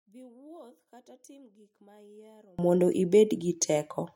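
From 0.0 to 2.59 s the speech drops about 32 dB to a faint residue, likely one channel inverted cancelling in mono; unlike a dropout, a faint difference signal survives.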